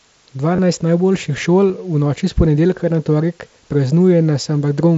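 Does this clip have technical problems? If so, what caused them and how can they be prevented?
Yes. At 0.56–0.58 s and 1.69 s, short buzzy patches hold at full level, then warble slightly as the sound resumes. This is concealed Bluetooth headset packet loss: the receiver filled 22.5 ms and 15 ms gaps, which fits three and two lost frames, by repeating the best-matching recent waveform. Keeping the headset close to the phone, with nothing in between and less 2.4 GHz traffic nearby, prevents it.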